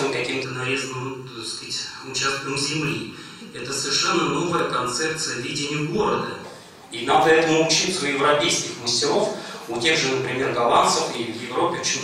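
Channel delay (comb filtering) from 0.44 to 6.44 s: one channel lags the other by under a millisecond, so summing cuts notches from around 700 Hz, sounding hollow.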